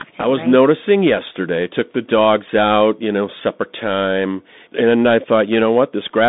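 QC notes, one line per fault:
Throughout: Bluetooth CVSD headset codec. The speech is confined to roughly 200 Hz to 3.7 kHz, with nothing above 3.8 kHz. The one-bit delta steps, consistent with a 64 kbps stream, audibly lag loud transients, giving scratchy sibilants and a granular hiss beneath the speech.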